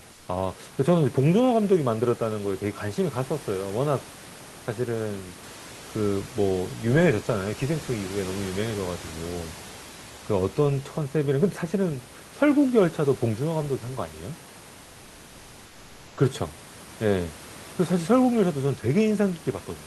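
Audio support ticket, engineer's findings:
Comfort noise in place of the background, 0.13–0.27 s (140 ms). Live room noise, about 28 dB below the loudest speech, swapped for steady featureless hiss, about 2 dB quieter. Sender's voice detector gated transmission during the pause; receiver synthesised shaped noise. Likely Opus DTX. Real room noise audible around it.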